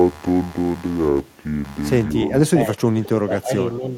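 Computer activity noise runs throughout: a buzzing pulse near 150 Hz, well below the speech, leaking from processor or graphics load changes through the shared audio ground. Speech suppressed in double talk follows from 2.86 to 3.93 s, where the speech dips by up to about 20 dB, most likely because an echo canceller could not separate this talker from the loudspeaker echo and turned this talker down.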